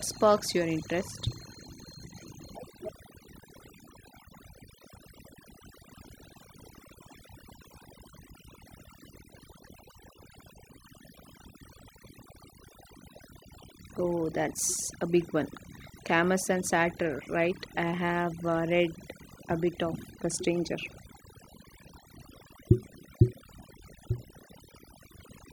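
Throughout the speech, the background drops to near silence flecked with twinkling specks: overdone noise removal, suppressing bands near the estimated noise floor.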